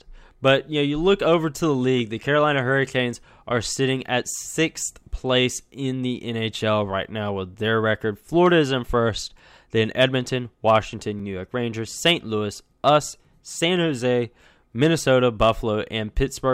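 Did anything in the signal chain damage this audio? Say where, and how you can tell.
Yes. At 11.20 s in the speech the sound jumps forward slightly, with no gap of silence between the two sides. That points to the driver and buffer stage, most likely a dropped buffer (overrun). The capture software failed to read a block of samples before the hardware wrote over it, so a few milliseconds of audio were lost and the remaining edges were spliced directly, producing the discontinuity heard as the jump.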